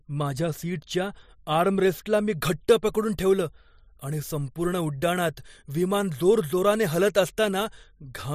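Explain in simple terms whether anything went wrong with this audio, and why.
From 2.33 s to the end, the speech has pre-emphasis left on. The treble was boosted before storage, as with the CD emphasis curve, but the matching cut on playback never happened. The high frequencies stay too strong, so the voice sounds thin, bright and hissy.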